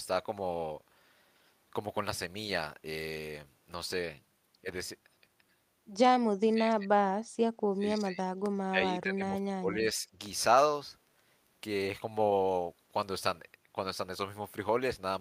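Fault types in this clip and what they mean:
Speech suppressed in double talk: the speech level drops sharply in three stretches, at 6.42 to 6.98 s, 7.71 to 8.22 s and 8.69 to 10.07 s. The deepest dips are about 30 dB in the first and about 25 dB in the others, so the speech dips or chops away. The likely cause is an echo canceller treating simultaneous far-end talk as echo and attenuating the near-end signal along with it.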